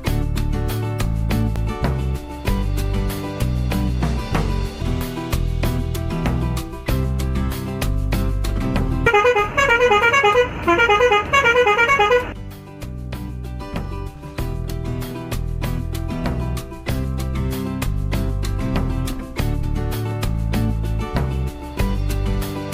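At 1.56 s, 4.81 s and 19.62 s there are brief bursts of damaged data in a compressed stream, each shorter than 20 ms. Corrupted bytes made the decoder misread those frames and lose sync until it found the next frame header. The result is a short chirp, squawk, click or brief hole.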